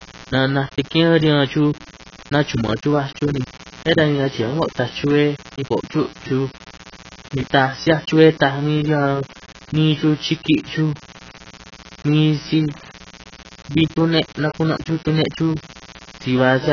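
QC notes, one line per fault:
throughout, mains buzz: A steady, raspy buzz sits under the speech for the whole clip at roughly 20 dB below it. It is built on 60 Hz: sharp switching spikes arrive twice per mains cycle and spread energy across a ladder of 60 Hz harmonics. That harmonic ladder is what separates it from a plain mains hum, which would be a smooth, low tone concentrated near 60 or 120 Hz.
throughout, AAC compression: The speech is dull and smeared, with nothing at all above 6.8 kHz. The damage is heavy and fits AAC-LC at a low bitrate around 16 kbps, which is the likely cause. At that rate the encoder lowers its cut-off and quantises the remaining frequency lines coarsely against its hearing model, so detail is lost and consonants blur. A simple low-pass filter would leave the passband clean, but here the smearing extends into the frequencies below the cut-off.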